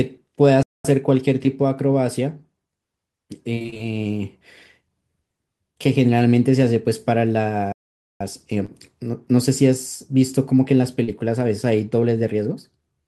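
At 0.63 s the speech cuts to silence for about 0.22 s, until 0.85 s, then resumes. This is a playback stall, likely the player running short of data or its output thread being blocked. A second, longer stall, about 0.48 s, runs from 7.72 to 8.21 s.

From 3.55 to 3.81 s, repeated packet loss gives a robotic, choppy texture. Seven short gaps, the longest 21 ms, are each bridged by extending the preceding sound. Nearly half the stretch is synthetic, so it sounds choppy, with pieces missing.

Short concealed packet loss appears at 8.66 to 8.70 s and 11.04 to 11.10 s. About 20 ms and then 40 ms of audio went missing. In each case the decoder continued the last sound and blended back, producing a brief smear or wobble.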